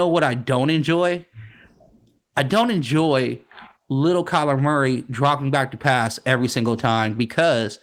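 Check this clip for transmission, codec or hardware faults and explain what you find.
Nothing to flag here; I listened closely and couldn't pick out a single fault anywhere in this speech.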